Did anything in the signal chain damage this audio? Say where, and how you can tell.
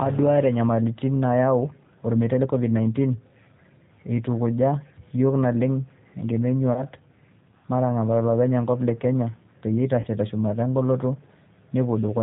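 Yes. At the codec stage, the whole clip passes through a low-rate speech codec, G.729, which fits an 8 kbit/s stream. The speech is rebuilt from a filter, pitch predictor and a few pulses, so nothing above 4 kHz survives, and the voice sounds plainly rough and synthetic throughout.

On the network side, VoIP packet loss was concealed by the speech codec, at 6.73 to 6.87 s and 10.01 to 10.07 s. Each gap fits about 30 ms of lost audio. The decoder stretched its last frame into a buzzy tone or coloured noise that fades, and the speech stays weakened briefly after the gap.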